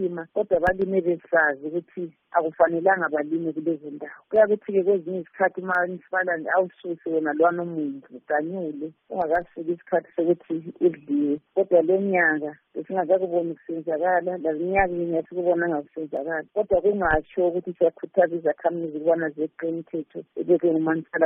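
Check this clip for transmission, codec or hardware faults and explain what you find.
Four isolated clicks point to one fault. Dropped samples are the likely cause at 0.67, 5.75, 9.35 and 16.17 s: a fraction of a millisecond goes missing, the waveform jumps, and each loss gives one sharp click.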